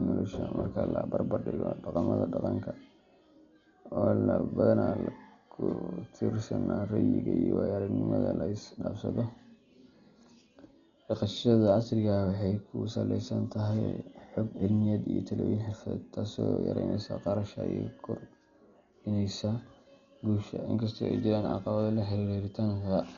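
From start to finish the speech sounds dull and gritty. Nothing gets through above about 6.9 kHz, and there's a rough, fluttering hiss around the tones. That's heavy damage, likely from Dolby Digital compression at a bitrate that fits roughly 40 kbps, with many frequency lines left empty and filled with noise.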